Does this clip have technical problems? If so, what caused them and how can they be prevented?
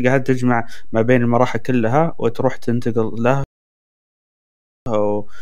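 Yes. A DC offset shifts the whole speech waveform off zero throughout, wasting headroom and leaving steady energy at the very bottom of the spectrum, though it isn't heard directly. A high-pass filter or DC-blocking stage in the recording chain prevents it.

A rebuffering stall happened when the player ran out of downloaded audio, so the speech cuts to silence from 3.44 s to 4.86 s and then resumes exactly where it stopped, adding about 1.42 s without losing anything. A larger playback buffer or adaptive bitrate streaming that steps down before the buffer empties prevents it.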